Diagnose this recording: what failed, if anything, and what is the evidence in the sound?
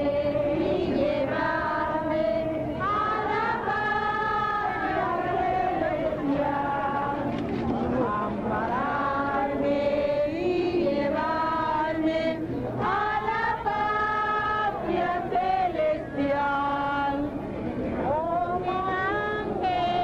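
Nothing failed; the sound carries no evidence of any fault.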